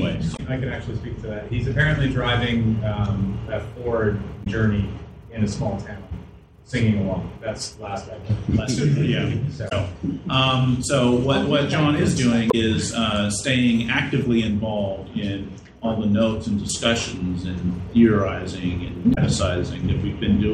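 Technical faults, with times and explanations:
0.33, 4.40, 9.65, 12.48 and 19.11 s, damaged data in a compressed stream: each time, about 70 ms of audio turns into a short chirp, squawk, click or hole. Corrupted bytes in the encoded stream make the decoder misread those frames, lose sync and hunt for the next valid frame header. On a waveform each event shows as an abrupt break in the envelope; on a spectrogram, as a narrow vertical patch of garbled, smeared energy that doesn't follow the surrounding sound.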